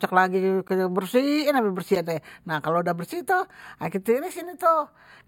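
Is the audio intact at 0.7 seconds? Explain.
No. At 0.68 s the speech drops out in a block of digital silence lasting about 15 ms. A run of samples was replaced by zeros, most likely because the output buffer was not filled in time. The signal cuts straight to zero and back with no fade. At this length the gap is too short to hear as a hole. It comes across as a brief tick or dip.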